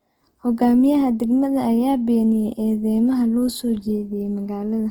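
From start to finish the speech sounds rough and grainy, with a noisy texture on sustained sounds, though the top end stays open to about 20.4 kHz. This is likely Opus compression in CELT mode, filling bit-starved bands with folded or noise energy, consistent with roughly 16 kbps.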